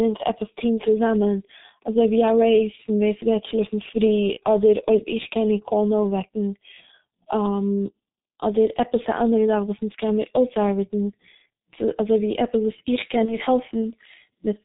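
Throughout, the speech passes through a G.723.1 codec, which fits its 6.3 kbit/s mode, coding 30 ms frames with a slowly updated voice model and nothing above 4 kHz. The damage is heavy: the voice sounds muffled and hoarse, consonants smeared.

At 4.34 to 4.40 s, and again at 13.26 to 13.41 s, VoIP packet loss concealed by the speech codec appears. A gap of about 30 ms was filled by extrapolating the previous frame, heard as a brief, fading smear with weakened sound lingering afterwards.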